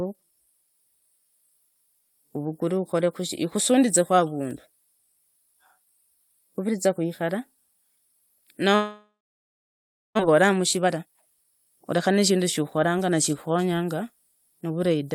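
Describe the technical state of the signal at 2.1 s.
At 2.1 s the speech signal is intact, with no technical fault audible at that moment.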